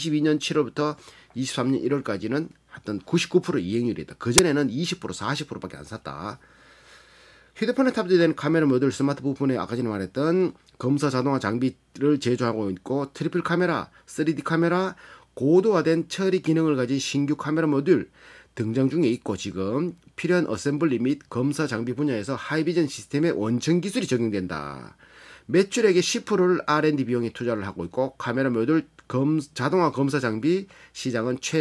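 At 4.38 s there's a very brief, hard-edged blast of very loud white noise, a classic case of file tags played as audio: the compressed bytes of an embedded cover picture got read as samples, so the decoder turned image data into pure static.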